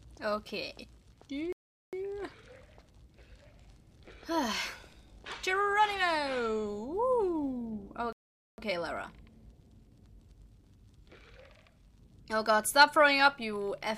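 Playback stall at 1.53 s and again at 8.13 s: the sound cuts out mid-flow for about 0.40 s, then 0.46 s, before resuming. The likely cause is the player running short of data or its thread being blocked, leaving the output silent until recovery.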